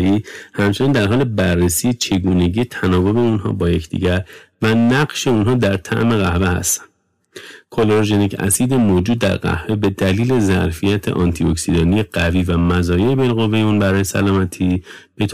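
From start to finish the speech drives a stage about 11 dB past what it can pass, so hard clipping flattens the peaks of roughly a tenth of the waveform. Those squared-off tops add high harmonics, heard as a harsh fuzz riding on every louder syllable.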